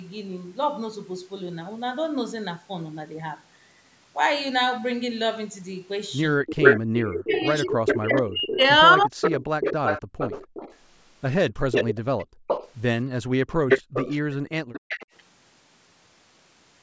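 From 6.37 to 9.21 s, speech was suppressed in double talk: the echo canceller, likely unable to separate the near talker from loudspeaker echo while both sides spoke, turned everything down. The speech dips by as much as roughly 40 dB and breaks up for about two seconds in total.

From 6.62 to 15.06 s there is echo leak. The far end's echo canceller likely failed to remove what its microphone caught from its loudspeaker, so a copy of the speech returns 258 ms late, only a few decibels below the direct speech.

The background was gated by the echo canceller at 10.02 to 10.19 s, 11.53 to 12.47 s and 13.51 to 14.81 s. The canceller clamped the microphone hard while the loudspeaker played, so the room sound drops by about 38 dB in brief holes and returns when the canceller releases. The call's microphone processing, with nothing above 8 kHz, is normal and not a fault.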